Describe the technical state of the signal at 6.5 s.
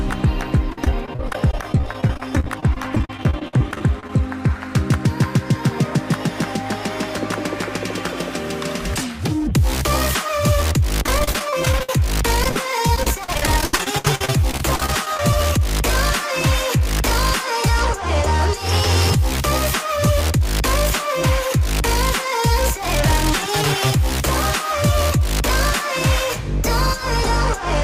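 At 6.5 s the signal runs cleanly, with no audible dropout, distortion, glitch or other technical fault.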